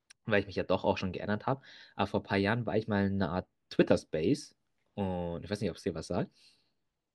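No technical faults are audible anywhere in the speech recording.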